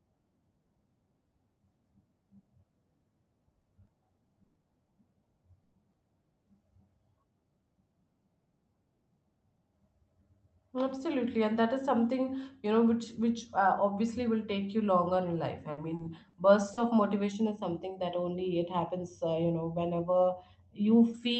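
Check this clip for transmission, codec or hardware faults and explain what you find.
Four kinds of fault appear in this speech clip.

Repeated packet loss (robotic sound) affects 3.61 to 4.65 s and again 15.71 to 16.79 s. In each stretch, four separate gaps open in the stream, adding up to 180 ms of missing audio, about a sixth of the span. The longest gap is 120 ms in the first stretch and 60 ms in the second. Each hole is patched by extending the preceding sound, and the next hole arrives before the speech has settled, so the voice turns choppy and metallic, with pieces dropped out.

A burst of packet loss hits from 5.63 to 5.75 s. A single 100 ms block of audio failed to arrive in time to be played. The receiver kept stretching the last sound while turning it down, so there is no silent hole. Instead, a held buzz or fading hiss bridges the gap, and the speech resumes further along with that tenth of a second gone.

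Short concealed packet loss follows at 5.91 to 5.95 s, where 20 ms of the stream was missing. The decoder filled the hole by continuing the previous sound, as pitched signal if voiced or shaped noise if not, then blended back into the real audio. It comes across as a brief smear or wobble, and a short consonant at that spot could disappear.

Channel delay (comb filtering) runs from 17.32 s to 21.14 s, the last stretch of the clip. One channel trails the other by roughly a third of a millisecond before the two are folded to mono. Content common to both cancels at evenly spaced frequencies, the first notch falling around 1.5 kHz, so the voice sounds hollow and phasey.

The call codec's band limit is audible throughout, with nothing above about 8 kHz, which fits Opus running at around 24 kbps.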